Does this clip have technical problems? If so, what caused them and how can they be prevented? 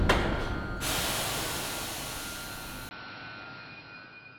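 Yes. At 2.89 s there is a 20 ms gap. After it, the sound turns dull, with nothing above 5.6 kHz. A faint new background noise appears, but the loudness holds steady. The likely cause is an input switched to a poorer device. Lock the input device before recording.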